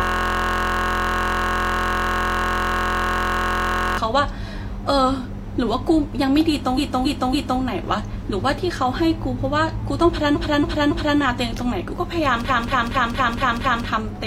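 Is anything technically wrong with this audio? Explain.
Yes, there are two kinds of fault.

System hang loop, from the very start to 3.98 s: the audio is already stuck when the clip begins. The playback system froze while the hardware kept replaying one 23.22 ms stretch, which fits a 1024-sample buffer. It repeats so fast that it merges into a steady buzz at about 43.1 Hz.

Repeated frames, at 6.74 to 7.57 s, 10.31 to 11.15 s and 12.45 to 13.84 s: a run of compressed frames was delivered more than once, so the same block plays again. At the first two times a 278.6 ms block plays three extra times, adding 836 ms each. At the third, a 232.2 ms block plays six extra times, adding 1.39 s. Each is heard as a stutter.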